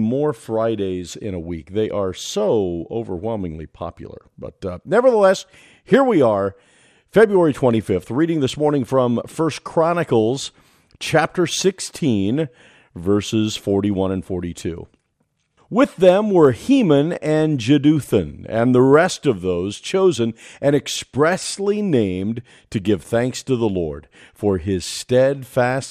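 MP2 compression runs through the whole speech clip: the sound is dull, with a gurgling, granular grit, likely from MPEG Layer II coding at a rate near 80 kbps, where starved upper sub-bands flicker off and the remaining bands are coarsely quantised.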